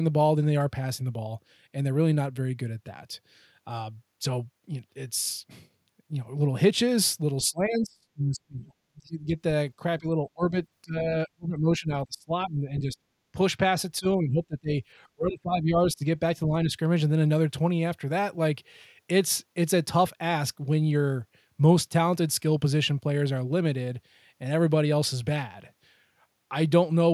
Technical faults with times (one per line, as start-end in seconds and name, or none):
7.43-8.71 speech suppressed in double talk
8.96-9.37 speech suppressed in double talk
9.99-10.55 speech suppressed in double talk
10.83-12.98 speech suppressed in double talk
13.32-13.38 speech suppressed in double talk
13.99-14.76 speech suppressed in double talk
15.15-16.05 speech suppressed in double talk
16.46-16.78 speech suppressed in double talk